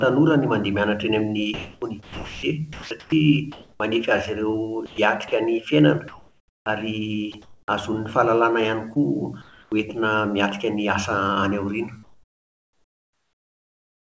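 From 1.54 to 3.8 s, 4.86 to 5.32 s and 8.94 to 9.72 s the speech is chopped by the voice detector, likely because it keeps switching sending on and off. Quiet bits drop into synthetic hiss, about 1.3 s of it in the first stretch. At 6.08 to 6.66 s and 7.32 to 7.68 s, comfort noise replaces the background, likely because the sender went quiet, so the room tone turns flat and featureless. At 7.32 s a sliver of speech is dropped by the voice detector, likely misjudged as background. After "any aoriana" at 12.03 s the background falls to steady comfort noise, about 11 dB quieter, likely for the same reason.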